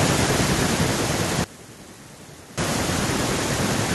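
Speech with two faults. From 0.05 to 1.22 s the automatic gain is falling: the AGC reads the input as too loud or too noisy and eases the level down by about 3 dB, background included. From 1.44 to 2.58 s the voice drops by about 20 dB, likely from one channel inverted, so the centred speech cancels when the channels are summed to mono.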